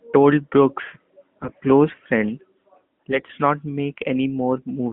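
AMR bit errors strike at 1.38 to 1.48 s, just before "close friend", and again from 3.10 to 3.33 s. In both spans, flipped bits in the weakly protected parts of the mobile speech frames slip past the checksum, so the excitation pulses land in the wrong places and the fine pitch, gain and spectral values go astray. Pitch and loudness roughly hold, but the voice turns hoarse and gargly. The first burst is short and harsh, and the second is longer and milder.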